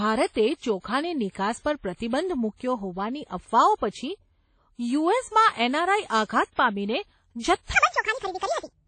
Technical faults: transcoding between lossy codecs; section at the wrong speed

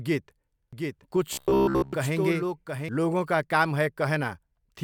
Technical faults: doubled audio track; robotic sound from repeated short buffers

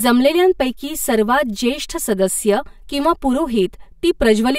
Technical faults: channel delay (comb filtering)

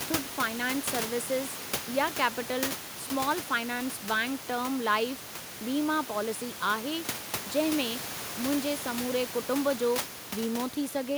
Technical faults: none

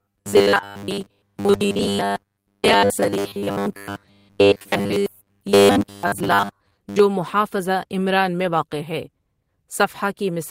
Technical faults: robotic sound from repeated short buffers

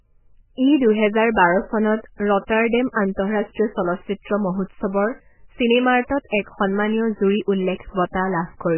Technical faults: MP3 compression

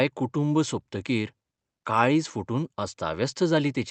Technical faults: none

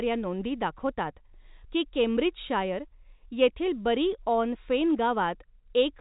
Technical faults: none

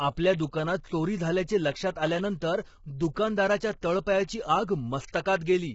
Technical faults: low-delay AAC compression; pre-echo

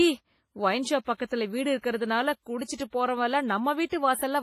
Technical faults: WMA compression

